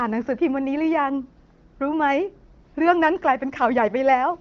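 No technical faults are audible in this speech.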